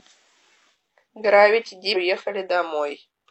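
At 1.03 s and again from 1.91 to 1.97 s, the speech jumps forward as compressed frames are skipped: whole coded frames never reach the output, so the decoder resumes further along the stream. The first jump loses roughly 0.4 s, the second around 0.3 s, which fits runs of about ten and seven frames of 46.4 ms each.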